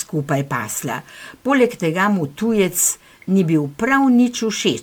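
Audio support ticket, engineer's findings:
Generation loss, throughout the speech. Swirly, smeared, hollow texture. Consonant attacks blurred. Band stops at 19.9 kHz. More degraded than the bandwidth suggests. Likely cause: repeated MP3 decode and re-encode, around ten passes, each near 129 kbit/s. Each pass quantises on a shifted frame grid. Noise and spectral holes compound.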